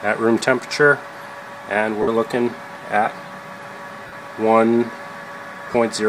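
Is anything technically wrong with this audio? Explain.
Yes, there are lost LE Audio frames in three spots: 2.02 to 2.08 s, 4.07 to 4.13 s, and 5.67 to 5.75 s. The first two each drop about 52.5 ms, which fits roughly seven frames. The last drops 45 ms scattered across 75 ms, with the longest gap around 20 ms. The LC3 decoder fills each hole by replaying the last spectrum with scrambled signs, so you hear a brief noisy smear in place of clean sound. The light codec compression underneath does only slight damage.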